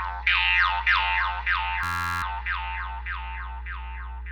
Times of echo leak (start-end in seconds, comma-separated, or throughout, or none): none